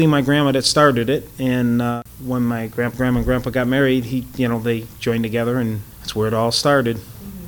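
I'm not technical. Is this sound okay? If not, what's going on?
No, there's a 50-per-second buzz under the sound the whole way through. It's a resampler restarted on every block, leaving a tiny glitch every 20 ms.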